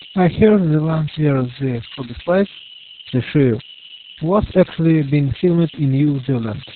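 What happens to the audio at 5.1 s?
At 5.1 s the speech carries converter idle tones, present across the whole clip rather than just at that moment. An undithered delta-sigma converter settles into repeating bit patterns on low-level input, producing a tone around 3 kHz plus grainy noise at about -16 dB below the speech. Its pitch, set by the converter input's offset, separates it from codec artefacts.

The speech is also heavily damaged by Opus voice compression in SILK mode, again throughout. It is narrowband with nothing above about 4.3 kHz, muffled, hoarse and slightly robotic, pointing to a very low rate near 6 kbps. Unlike the idle tone, this damage follows the speech itself, coarsening each syllable.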